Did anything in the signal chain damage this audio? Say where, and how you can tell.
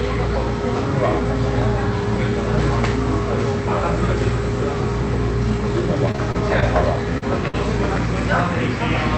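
Yes. The damage is in the network stage of a call path. From 6.11 to 6.64 s there is repeated packet loss with a robotic sound. Four gaps land in that half second, the longest about 25 ms. Together they take out roughly 80 ms of real audio, about 16 percent of the stretch. The receiver patched each hole by extending the previous sound. The quick succession of patches gives the choppy, mechanical texture.

At 7.18 to 7.24 s there is a short concealed packet loss. About 40 ms never arrived in time. The decoder bridged it by carrying the preceding sound forward and blending back in. You hear it as a brief smear or wobble rather than a clean cut. Because it is a single isolated hole, the disturbance is over almost as soon as it starts.

At 7.48 to 7.55 s comes a burst of packet loss, about 60 ms in a row. Here the concealment ran longer. The last sound was held and faded down while the gap lasted. 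Playback then picks up later in time, so the segment in between is simply missing. The coding itself, which points to Opus at around 48 kbps, stops near 8 kHz and contributes no dropouts of its own.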